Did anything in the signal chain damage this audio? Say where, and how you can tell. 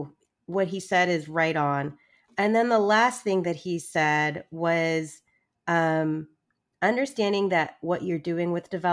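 No, nothing in the signal chain damaged this audio.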